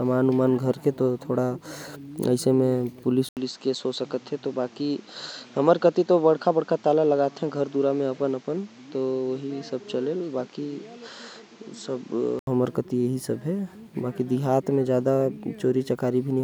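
An 80 ms gap at 3.29 s, then duller, quieter speech with nothing above 8 kHz until 12.47 s: likely input switched to a poorer device.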